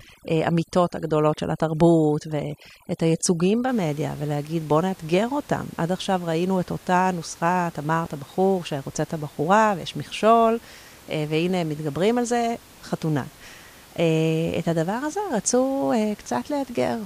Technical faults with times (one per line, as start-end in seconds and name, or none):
0.00-3.69 overdone noise removal
8.05 chunks out of order